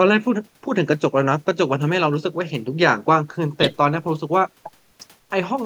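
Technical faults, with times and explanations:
No technical faults can be heard in this speech.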